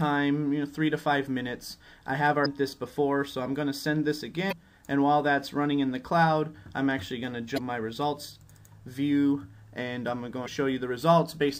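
Damaged data in a compressed stream appears four times, at 2.42–2.46 s, 4.48–4.53 s, 7.54–7.58 s and 10.44–10.48 s, each a short chirp or blip of about 44 ms. At each point the decoder hit corrupted bytes, misread or discarded the affected frames, lost sync and hunted for the next valid frame header before resuming. That brief garbled output, repeated at these four spots, is what cuts through the sound.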